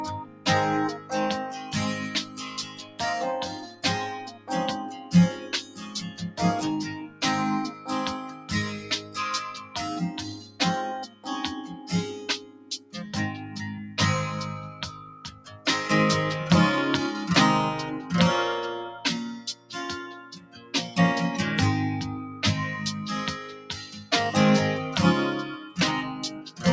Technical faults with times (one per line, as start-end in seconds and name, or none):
0.00-26.72 noise suppressor applied to music or sounds
0.18-6.39 sound cut by the noise suppressor
6.94-12.94 sound cut by the noise suppressor
14.72-15.66 sound cut by the noise suppressor
19.47-20.74 sound cut by the noise suppressor
23.49-24.11 sound cut by the noise suppressor
25.58-25.78 sound cut by the noise suppressor
26.31-26.61 sound cut by the noise suppressor